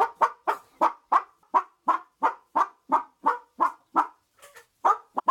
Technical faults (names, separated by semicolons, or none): damaged data in a compressed stream